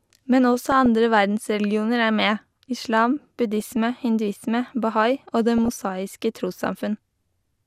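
Speech with DAB burbling at 0.72–0.86 s (just before "verdensreligioner er"), 3.60–3.76 s, 5.58–5.81 s and 7.20–7.47 s. Bit errors from weak reception corrupt MP2 sub-bands, which shows as flickering rectangular patches on a spectrogram.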